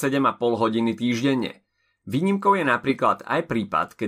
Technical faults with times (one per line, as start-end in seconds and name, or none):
none